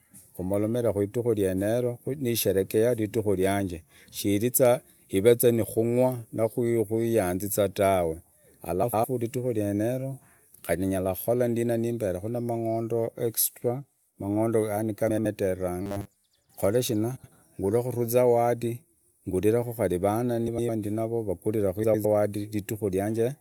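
A speech recording with two kinds of fault. Frames out of order: pairs of neighbouring frame runs were decoded in swapped order at 8.82–9.05, 15.09–15.26, 17.16–17.32, 20.47–20.70 and 21.84–22.05 s, so blocks of 104.5 or 78.4 ms, consistent with runs of four or three frames, play exchanged, giving a garbled flutter but no lost time. Robotic sound from repeated short buffers: from 15.82 to 16.24 s new audio likely arrived too seldom, so a 10 ms chunk was looped while most of the real signal was skipped, imposing a rigid, metallic 100 Hz buzz that only loosely tracks the speech.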